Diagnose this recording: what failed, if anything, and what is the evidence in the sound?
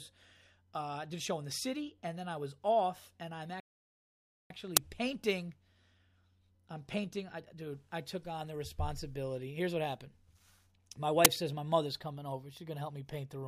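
Playback stage, playback stall: right after "was off and I'm" the speech cuts out mid-flow at 3.60 s and stays silent until 4.50 s, a gap of about 0.9 s. On a waveform this is a flat line, and on a spectrogram it is a fully empty vertical band. The likely cause is the player starving for data or its output thread being blocked, so nothing reached the output until it recovered.

Driver or buffer stage, uninitialised buffer: two loud, short bursts of digital noise appear at 4.77 s, lasting 5 ms, and at 11.25 s, lasting 10 ms, just before "says my mother's coming". Each shows on a waveform as a brief block of large, random-looking samples and on a spectrogram as a thin broadband stripe. A block was sent to the output before any audio was written into it, so leftover memory was played as sound.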